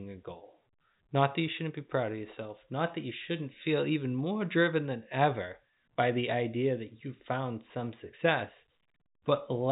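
No technical faults can be heard in the speech. The G.711 telephone coding is working as intended, with nothing above 3.8 kHz, which gives the narrow, band-limited sound of a landline call.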